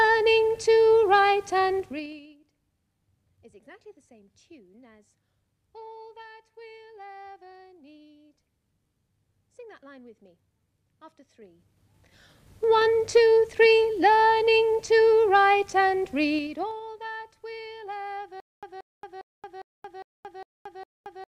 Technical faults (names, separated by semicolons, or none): zipper noise; stutter with silent gaps